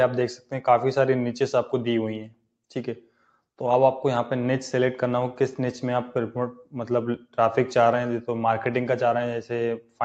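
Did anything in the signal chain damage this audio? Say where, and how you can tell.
Yes, in the call processing. A noise suppressor applied to music or sounds ran through the whole clip. Level swings by about 5 dB as steady content is misread as noise. Attacks pass, but held sound and tails sink, so it pumps.

There are three spots of sound cut by the noise suppressor: 0.37 to 0.52 s, 7.18 to 7.38 s, and 9.8 to 10.0 s. Each dips by up to about 12 dB. Sustained or decaying parts were pulled down hard. Nothing above 8 kHz fits the Opus codec path.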